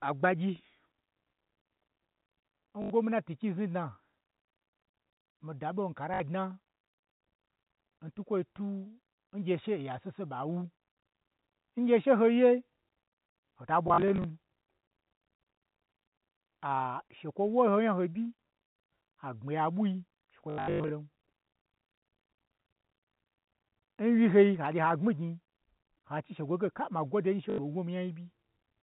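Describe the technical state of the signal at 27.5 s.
At 27.5 s there is packet loss with last packet repeated, lasting 80 ms to 27.58 s. The receiver replays one stale packet to cover the gap, leaving a short robotic stutter with a 50 Hz buzz that fits 20 ms packets, not the silent hole of a plain dropout.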